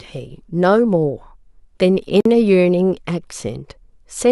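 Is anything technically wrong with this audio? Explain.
Yes. At about 2.20 s there's a gap at a join of encoded pieces: a gap of roughly 50 ms cuts into the speech until 2.25 s. Two separately encoded chunks were spliced untrimmed, so encoder delay and end padding sit between them. Edges are smeared, and the speech resumes where it stopped.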